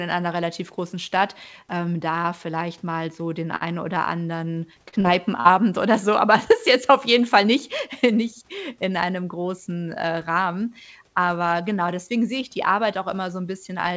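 At 3.56 to 3.64 s a packet arrives late, so the jitter buffer runs dry and the receiver holds the last sound for about 49 ms until the packet turns up. Nothing is lost, but playback now runs about 49 ms behind. This short stall from a late packet is heard as one sound dragged out slightly too long, with a faint buzz or dip in the held stretch.

Three short concealed packet losses follow, at 4.89 to 4.95 s, 5.00 to 5.07 s and 5.40 to 5.51 s. In each, about 40 ms of speech never reaches the decoder, and the receiver fills the gap with 36 to 40 ms of synthesised continuation before blending back into the real audio. The first two sit close together and give a quick double smear or wobble. The third adds a few milliseconds of extra time, so it sounds slightly stretched as well as smeared. Each gap can also take a brief consonant with it. All of this plays over a band that stops at 8 kHz, which fits a wideband call codec such as G.722 at 64 kbps.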